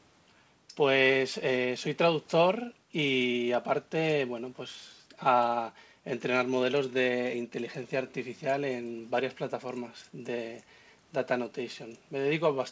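Nothing in this speech recording stood out as a problem on listening, with the call-style band limit at 8 kHz being the normal behaviour of the microphone processing and the G.722 call path rather than anything amiss.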